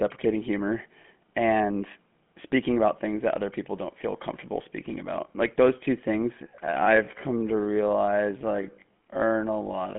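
Throughout, the speech carries the signature of the GSM full-rate codec. The spectrum is confined to a telephone band of roughly 200 Hz to 3.4 kHz, with nothing above 3.7 kHz, and the damage is plainly audible as a buzzy, gravelly roughness. The codec fits the voice to a vocal-tract model driven by a sparse, regularly spaced pulse train, which fits a 13 kbps GSM stream. That coarse excitation is what gives the voice its grainy edge.

From 6.41 s to the end, the pace drops abruptly to roughly half speed (0.52×) while the pitch stays where it was. The slowed section drags. The likely cause is a time-stretch applied to fit a target length, where short segments are repeated to lengthen the audio without shifting its pitch.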